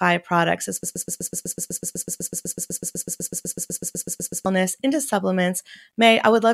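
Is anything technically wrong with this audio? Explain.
Yes. From 0.83 to 4.46 s, a broken-record loop, likely a stalled stream, repeats one 125 ms fragment 29 times, drawing identical back-to-back blocks across the waveform.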